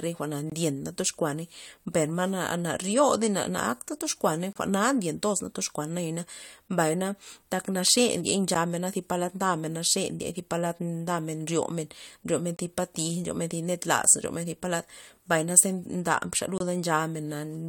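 Gaps between stream segments in this speech recording interrupt it at 0.50–0.52 s, 4.53–4.56 s, 8.55 s, 12.57–12.59 s and 16.58–16.60 s. Each is a hard-edged hole of silence, roughly 10 to 27 ms long. The four-second spacing matches the segment length. Where one segment's time stamps end short of where the next begins, the player pads the gap with silence, so nothing is lost but the sound stops abruptly.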